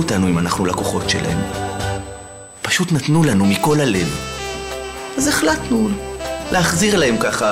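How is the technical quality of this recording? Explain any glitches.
The recording has one steady fault, USB whine, running from start to finish. A fixed tone at 8 kHz, strongest at its 16 kHz harmonic and roughly 20 dB below the signal, comes from the bus's 125-microsecond microframe current pulses leaking through power or ground. Its pitch never drifts, and its frequency sits on the 8 kHz grid, unlike low mains hum at 50 or 60 Hz.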